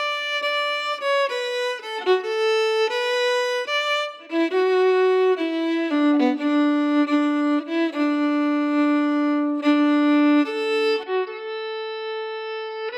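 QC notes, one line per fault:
11.03–12.98 s input switched to a poorer device: sound abruptly dulls, drops slightly in level, and loses everything above 5.4 kHz, likely from a change to a narrower-band microphone.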